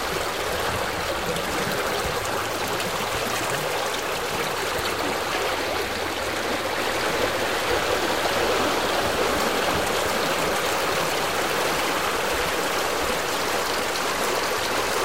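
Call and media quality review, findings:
Doubled audio track, 6.77 s to end: every sound repeats around 0.7 s later at roughly equal level, full-band, no decay or room colour. Copy starts abruptly. Likely cause: second capture via slower path, or edit holding two offset copies.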